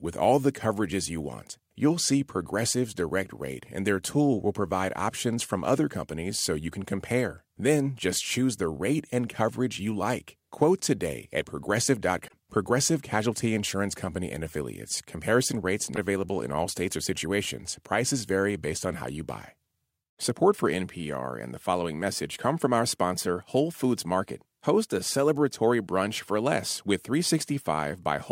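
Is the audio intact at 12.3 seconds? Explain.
No. From 12.27 to 12.34 s the speech skips ahead with a brief garbled glitch, likely a broken MP3 bit reservoir: after lost frames, the next frames decode borrowed bits from the wrong frame. The 70 ms span fits roughly three 26.1 ms frames. On a spectrogram it shows as a short vertical smear, and on the waveform as an abrupt discontinuity.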